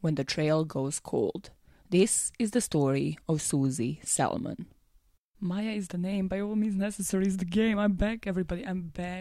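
Two single sharp clicks at 6.15 s and 7.21 s are likely dropped samples, where a handful go missing; unlike a dropout, no sound is lost.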